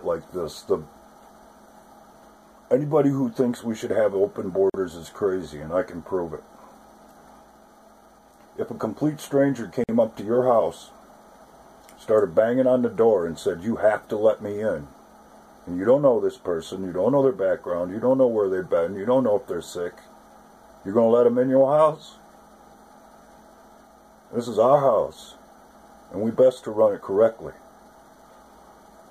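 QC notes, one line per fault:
4.70–4.74 s and 9.84–9.89 s: gap at a join of encoded pieces. The sound drops out for about 45 ms and then about 51 ms, and resumes exactly where it stopped. The pieces were encoded separately and butted together untrimmed, so each join keeps the encoder's leading delay and last-frame padding as dead air. On a waveform each gap is a flat line with sharp, slightly softened edges. On a spectrogram it is an empty vertical band across all frequencies.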